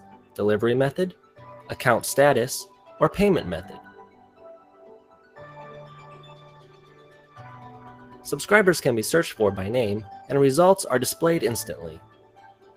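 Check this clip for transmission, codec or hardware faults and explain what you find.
One processing fault affects the whole clip. A noise suppressor designed for speech was left active on this audio, and there are five moments where it cut the sound itself.

Noise suppressor applied to music or sounds, throughout: the suppressor treats steady tones, ambience and decaying tails as noise and pulls them down by varying amounts, with a swing of around 10 dB. Onsets pass through while sustained sound sinks, so the level pumps and thins.

Sound cut by the noise suppressor, at 0 to 0.37 s, 1.13 to 1.39 s, 2.66 to 2.87 s, 3.9 to 5.38 s, and from 11.99 s to the end: in these spans it misjudged the sound as noise and gated it harder. The drop reaches about 9 dB, and about 6 dB at 2.66 s. The sound ducks and its decay is chopped short.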